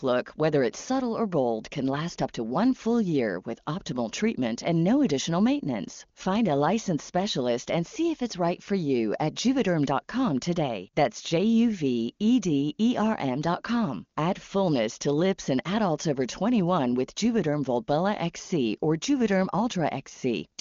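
No technical faults occur at any point in the speech, which is carried over the AMR wideband (HD Voice) link with nothing heard above about 7.1 kHz.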